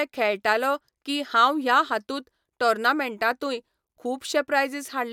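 No technical faults heard.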